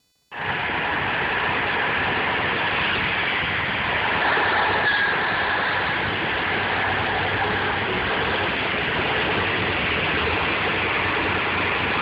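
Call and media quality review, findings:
Computer activity noise throughout the clip. Faint buzzing and chirping with a pulse rate of around 500 Hz, well below the sound's level. It follows the computer's load, not the audio. Probable component: shared ground between the computer and the audio circuit. CPU, GPU or mouse activity modulates it.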